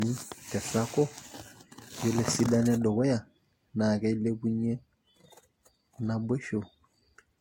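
Generation loss runs throughout the speech, with a swirly, hollow smear and softened consonant attacks, and nothing above about 16.6 kHz. The cause is likely repeated lossy encoding, about three passes, with each requantising on a shifted frame grid, and the artefacts point to Vorbis near 60 kbit/s.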